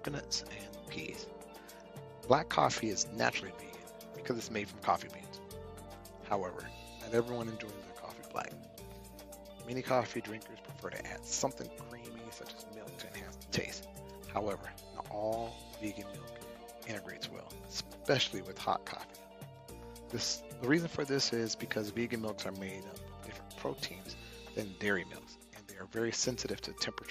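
No technical faults can be heard anywhere in this audio. Nothing in the recording calls for a timestamp or a correction.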